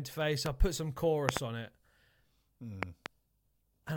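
Loud pops hit at 0.46 s, then as doubles at 1.29 to 1.39 s and 2.83 to 3.08 s, jumping well above the speech, likely from switch or plug voltage spikes.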